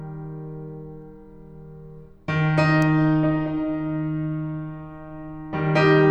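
A music clip carrying a single electrical switching spike at 2.82 s, heard as one sharp snap that sits on top of the music rather than belonging to it. It peaks at around -20 dBFS and lasts only a couple of milliseconds. The likely cause is a nearby switch, motor or static discharge arcing briefly into the audio line. On a waveform it shows as a lone narrow spike; a spectrogram shows a thin vertical stripe across the full frequency range.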